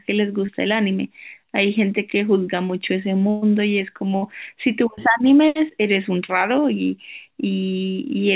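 Short concealed packet loss at 0.46 to 0.50 s: roughly 20 ms of the call arrived too late to decode, so the receiver extended the preceding sound to cover the hole and blended back into the real signal. It comes through as a brief smear or wobble.

Burst of packet loss at 3.30 to 3.44 s: about 120 ms went missing in a row. Concealment continued the last sound and faded it as the gap lengthened, giving a held buzz or thinning hiss with no true silence, before the audio resumes further along.

Another burst of packet loss at 4.16 to 4.24 s is shorter, about 60 ms, with the same sustained, fading fill and a small jump forward where the lost stretch is skipped.

Short concealed packet loss returns at 6.26 to 6.30 s, with about 26 ms synthesised to bridge a 20 ms hole. It is heard as a quick wobble over the join, through a call path with nothing above 4 kHz, which fits G.711 mu-law at 64 kbps.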